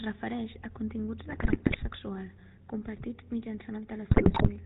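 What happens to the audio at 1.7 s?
At 1.7 s the speech is inside a burst of GSM bit errors running from 1.26 to 1.84 s. Corrupted bits reach the decoder, so the filter, pitch and gain values for frame after frame come out wrong. The voice breaks into squawks, pops and gargling, with the level jumping from one frame to the next. The damage is dense enough to fit a bit error rate of around 5%. On a spectrogram this shows as blocky frame-length patches of smeared or misplaced energy. The waveform shows sudden amplitude spikes.

Underneath that burst is the GSM full-rate codec, which runs through the whole clip at a quality that fits a 13 kbps stream. It models the vocal tract and drives it with regularly spaced pulses, keeping only every third excitation sample. That gives the voice a plainly audible buzzy, gravelly roughness. Nothing passes above 4 kHz, so a spectrogram shows a hard ceiling there, and below it the harmonics look coarse and grainy.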